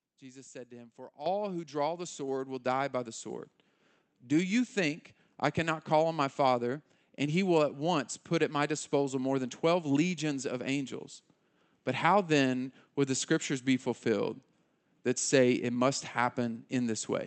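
At 1.26 s, just before "who draw the", the microphone volume is stepped up by about 10 dB in a single jump, so speech and background noise get louder together. The waveform envelope widens abruptly, and the spectrogram brightens at once across the whole band up to 8 kHz.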